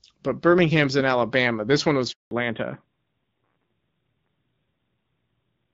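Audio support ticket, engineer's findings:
Handover gap, 2.11 to 2.31 s, right after "one was": the audio dies away quickly and stays silent for 200 ms while the call moves networks. It is a clean hole with no concealment fill, unlike a packet-loss glitch, and a bandwidth change follows immediately.

Fallback to narrowband, 2.31 s to end: nothing above 4 kHz, so the sound turns duller and rougher. The narrowing starts exactly at the handover and never recovers, which sets it apart from a fixed low-pass filter or EQ. Before the gap the sound is wideband with light AMR-WB codec damage, fitting 12.65 kbit/s HD Voice. After it, the sound fits AMR-NB at 12.2 kbit/s.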